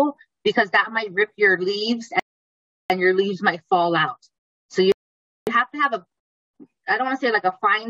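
At 2.20 s the audio drops into silence. It picks up again at 2.90 s, exactly where it stopped. This is a rebuffering stall. The player used up its downloaded audio and waited for more data before continuing. No sound is lost, but about 0.70 s of dead air is inserted. A second stall hits at 4.92 s and resumes at 5.47 s. It adds about 0.55 s. Both gaps are clean silences with seamless continuation.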